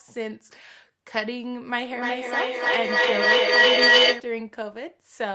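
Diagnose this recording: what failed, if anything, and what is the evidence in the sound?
Feedback echo between two devices, a call-processing stage fault, runs from 1.91 to 4.34 s. Sound returns roughly every 0.3 s and builds to about 12 dB above the speech. A second device is replaying this microphone, and its echo canceller only removes its own output. A spectrogram shows evenly spaced, increasingly ringing copies, and the waveform envelope swells instead of decaying.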